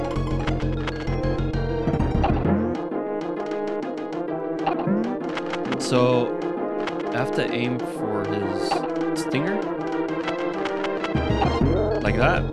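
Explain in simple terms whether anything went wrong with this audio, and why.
Nothing went wrong with this audio: the signal holds steady all the way through, with no dropouts, glitches or other technical problems to point to.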